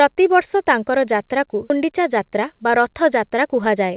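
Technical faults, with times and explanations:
1.70 s, skip ahead: the speech jumps straight forward with no gap, and roughly 0.4 s of audio is simply gone. The two sides butt together almost directly, which fits audio being dropped while later audio was already queued and ready to play.
1.84–3.91 s, jitter buffer speed-up: the speech runs about 9% fast at the same pitch and sounds a bit hurried. The receiver keeps trimming tiny pitch-period slices, around a fifth of a second in total, to pull an overfull buffer back down. Through all of it the narrowband call sound, with nothing above 4 kHz, fits 64 kbps G.711 A-law.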